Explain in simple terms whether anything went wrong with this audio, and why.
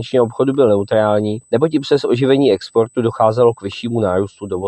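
There's a USB whine running under the whole clip: a thin, steady high-pitched tone at 8 kHz, sitting faint beneath the sound. It happens when a USB connection pulls power in tiny, regular bursts that leak into the audio through the power or ground lines, so the whine never changes pitch.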